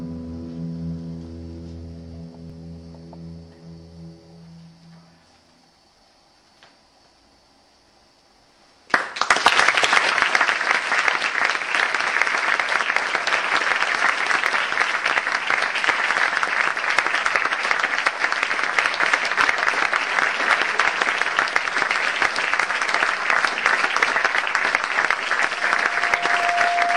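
Overlap between stream segments causes four small skips in the audio, at 2.50–2.52 s, 14.46–14.50 s, 20.47–20.50 s and 26.43–26.46 s. Each removes roughly 25 to 35 ms of sound, so the waveform jumps. The skips fall on a 6 s grid, which fits segments 6 s long whose time stamps overlap slightly; the player trims the apparent duplicate even though that stretch was never repeated. Loudspeaker feedback squeal starts at 25.54 s and runs to the end of the clip: a steady 699 Hz tone swells over about a second until it sits a few dB above the rest of the sound. A microphone is picking up the loudspeaker it feeds, and at 699 Hz the loop gain exceeds one, so that single frequency keeps reinforcing itself.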